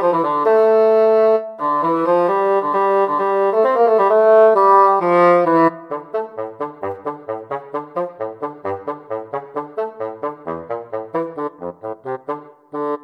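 No technical faults can be heard anywhere in this recording. Nothing in the signal path gives way at any point.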